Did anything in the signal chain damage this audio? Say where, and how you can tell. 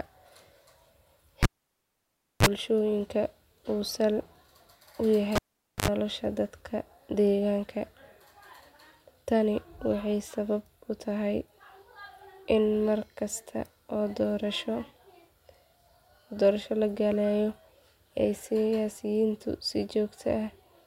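Yes, in the analogue wiring: a cable pulled and plugged in twice, at 1.43–2.46 s (about 0.98 s unplugged, 34 ms of buzz) and 5.36–5.88 s (0.47 s unplugged, 75 ms of buzz). Pops bracket the near silence, and 50 Hz mains buzz appears as the bare tip touches. A digital dropout would give clean silence.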